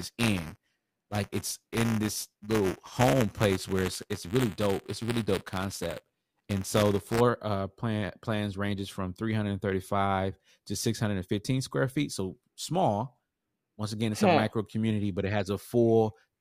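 Buffer tearing, 0 to 7.21 s, before "uh plan plans ranges": write and read pointers cross every 5 ms, splicing in slivers of stale audio, heard as a 200 Hz robotic buzz.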